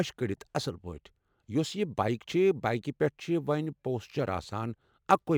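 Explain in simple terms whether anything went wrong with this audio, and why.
Sample clock jitter runs through the whole recording, from start to finish. The clock that tells the converter when to take each sample was unsteady, wobbling by a couple of microseconds at random. Each sample was therefore captured slightly too early or too late. That timing error matters most where the speech changes fastest, so a faint hiss or roughness rides on the louder and brighter sounds and drops away in the pauses.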